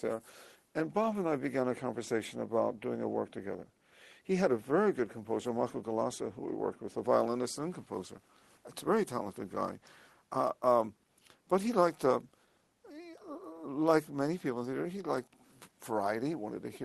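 No technical faults are audible.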